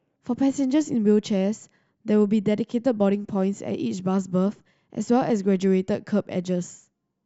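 No technical faults are audible anywhere in the speech.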